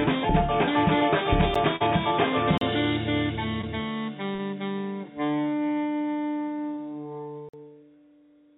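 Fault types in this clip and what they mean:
Block of digital silence: The music drops straight to silence and snaps back with no fade. The one at 1.54 s is only about 12 ms, which fits a 512-sample buffer, and it comes across as a tick. The holes at 2.58 s (about 35 ms) and 7.49 s (about 46 ms, which fits a 2048-sample buffer) are long enough to hear as short dropouts.
Short concealed packet loss: Four times, chunks of the call didn't reach the decoder in time, and the receiver filled the gap by stretching the last bit of sound before blending back into the real audio. Around 1.76 s and 4.35 s about 40 ms went missing, which is enough for a smear or wobble in the music. The 20 ms losses at 3.61 s and 6.75 s are briefer blurs, all heard through the G.711 call band that stops at 4 kHz.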